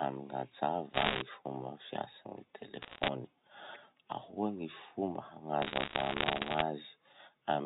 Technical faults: bit errors on a digital phone line

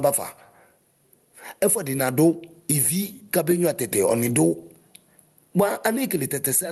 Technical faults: gain pumping

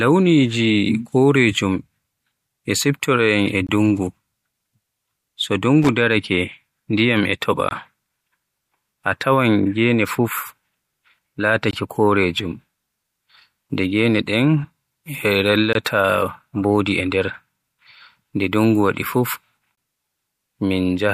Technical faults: gap between chunks; loose connector crackle

